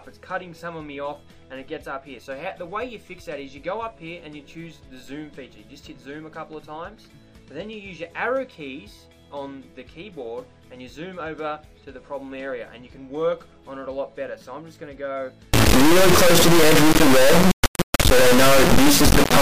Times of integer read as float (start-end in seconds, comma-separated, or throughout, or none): 15.54-19.42